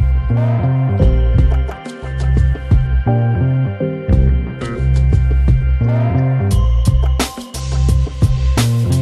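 No technical faults are audible.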